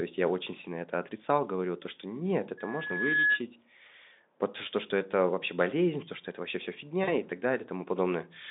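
At 7.04–7.13 s, between "что это вообще все" and "и так", VoIP packet loss concealed by the speech codec stretches about 40 ms of missing speech into a fading buzzy or noisy smear over the Speex line.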